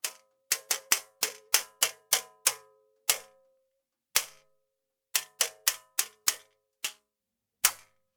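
Nothing in this recording stood out as a technical fault on listening.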